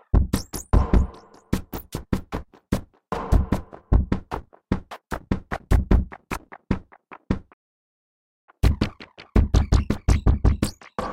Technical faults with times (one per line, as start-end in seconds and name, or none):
7.53-8.49 playback stall
8.49-11.13 catch-up at higher speed